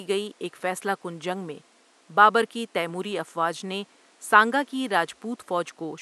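No technical faults are present in the speech; the only thing beneath it is a low room background sitting about 35 dB down, which belongs to the recording space rather than the system.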